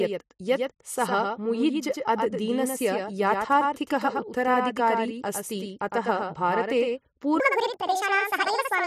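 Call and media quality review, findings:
Doubled audio track, whole clip: speech carries a flat, full-band echo about a tenth of a second behind, roughly 5 dB below the main signal, with no decay or room colour. Slapback effect, not reverb. Likely a second capture via a slower path or an edit leaving two offset copies summed in the mix.

Section at the wrong speed, 7.40 s to end, right after "अस्ति अतः भारते": speech turns high and hurried, playing 1.69 times fast, pitch up about ten semitones, speed and pitch shifting together abruptly. Likely resampling or playback against the wrong clock for that segment in the editor or player.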